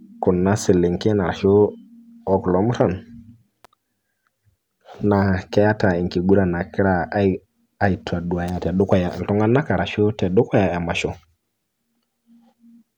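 Speech peaks overrun the recording stage's maximum level, so their tops are cut flat; this hard clipping adds crackle at 0.70 s, at 2.81 s just after "o kulo", from 5.58 to 5.85 s, at 6.33 s, 7.85 s and 8.93 s, and from 10.38 to 10.58 s, with overdrive from about 0 to 2 dB. At 3.65 s and 8.49 s a sharp snap sits on top of the speech, likely an electrical switching spike, where a nearby arc is picked up by the audio line.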